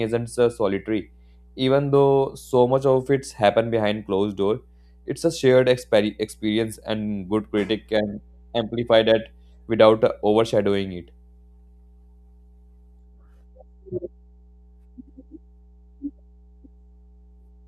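Mains hum runs through the whole of this speech clip, a steady low tone at 60 Hz sitting roughly 30 dB below the talker, with some low harmonics above it. Power-line current has leaked into the signal path, most plausibly through a ground loop between connected pieces of equipment or via magnetic pickup from a nearby transformer. The 60 Hz fundamental points to mains wiring on a 60 Hz supply.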